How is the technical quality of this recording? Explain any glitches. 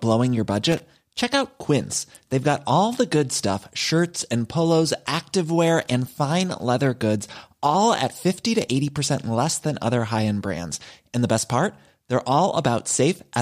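Two short glitches spoil the speech. Loose connector crackle appears at 0.72 to 0.80 s and again at 5.82 to 5.91 s. A worn or dirty contact keeps opening and closing as it shifts, chopping the signal into fragments. Each event is a brief, irregular burst of scratchy crackle lasting under a tenth of a second.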